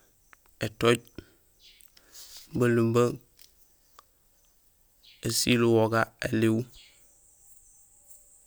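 Nothing here stands out as a technical fault; the speech comes through without any glitches, dropouts or odd artefacts catching the ear along the way.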